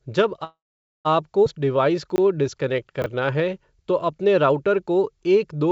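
From 0.44 to 1.07 s the speech stops for about 0.61 s. This is a call audio freeze. The last sound carries on briefly as a fading buzz or hiss, then about 0.48 s of silence follows. Packets were likely held up and the jitter buffer ran dry. The speech then resumes where it stopped, with nothing lost.

At 1.45 s there is a skip ahead. About a fifth of a second of speech is simply gone. The two sides are joined with only a tiny 9 ms fill, so the audio lurches forward abruptly.

From 1.58 to 4.13 s, ending just before "अपने राऊटर को", a jitter buffer slow-down stretches the speech. Single pitch periods are repeated to rebuild the reserve, adding 244 ms. Playback runs at 91% speed with unchanged pitch, sounding drawn out.

Inside that stretch, two chunks are out of order. At 2.10 to 2.18 s a 20 ms chunk plays three chunks late. At 3.02 to 3.06 s another plays one chunk late. Each gives a brief jumbled moment with hard joins. 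Throughout, the wideband call codec leaves nothing above 8 kHz.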